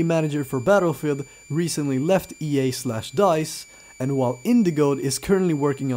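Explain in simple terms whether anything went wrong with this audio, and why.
A switching supply whistle runs through the whole clip, from start to finish. It is a thin, high whistle that wanders slightly between about 2.31 and 2.37 kHz, sitting faintly but steadily underneath the sound. It comes from a switching power supply, the small electronic circuit that powers recording gear by switching on and off very rapidly. When that switching falls into the audible range, the circuit itself sings, and the recording picks up that tone.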